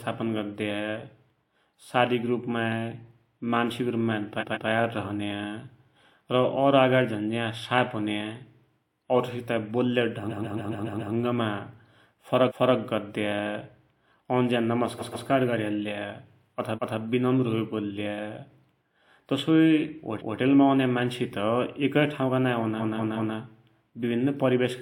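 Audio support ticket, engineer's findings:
Repeated frames: speech stutters as identical 0.14 to 0.28 s blocks replay at 4.39, 10.29 to 11.12 (after "औरसित बोल्या", six extra plays), 12.47, 14.98, 16.74 (before "विनम्र होइ"), 20.18 (before "औन्या मान्ससित एकै") and 22.78 to 23.34 s. The cause is the encoder or transport writing compressed frames more than once, in units of about 46 ms. It differs from dropouts because nothing is lost and the timeline lengthens by the repeated time.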